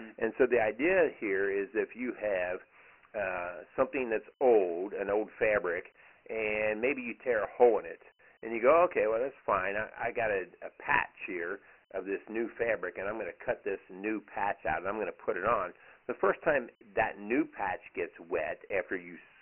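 Throughout, Dialogic VOX ADPCM coding: heavy 4-bit quantisation leaves gritty hiss trailing the speech, with nothing above 3 kHz, which fits 6,000-sample, 24 kbps storage.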